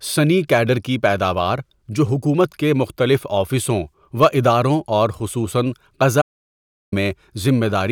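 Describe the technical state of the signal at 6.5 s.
At 6.5 s the speech is gone entirely: an audio dropout to silence runs from 6.22 s to 6.92 s, cutting the sound off mid-flow and bringing it back just as abruptly about 0.70 s later. The gap is silent, with no room tone or background left underneath. The likely cause is that the input was briefly lost, through a disconnected device, a failed link or a stray mute, while recording carried on writing silence, so whatever was spoken in that span is missing.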